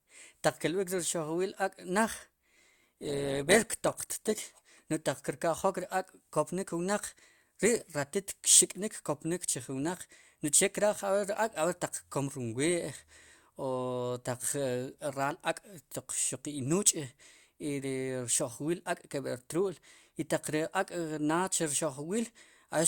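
From 2.43 to 4.43 s the speech abruptly drops in quality for two seconds: this is an adaptive stream at a lower bitrate. When the connection slowed, the player switched to a leaner encoding. The sound sits consistent with a drop from around 64 to 16 kbit/s Opus, so codec smearing rises. Unlike packet loss, there is no gap or dropout. The quality simply steps down and back up cleanly.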